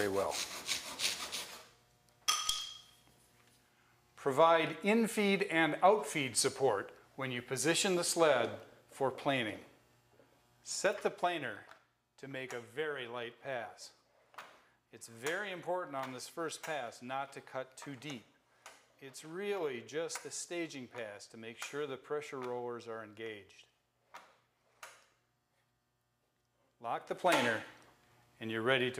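Zipper noise appears from 10.52 to 11.80 s, where the level drops roughly 10 dB in unsmoothed 2 dB steps, about four a second, each a small click. It recurs from 26.94 to 27.42 s as a faster ticking rise of about 10 dB.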